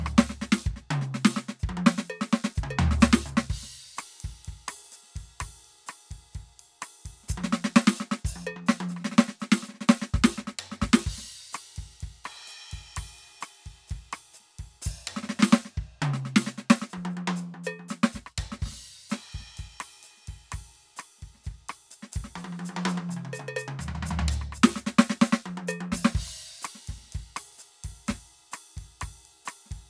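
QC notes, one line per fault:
Nothing to flag here; the music runs along with no faults to note.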